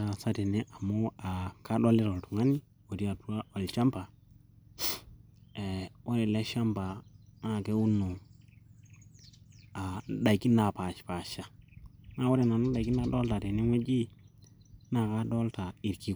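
A speech recording with no technical fault to report. Nothing in the audio breaks, drops out or shifts at any point.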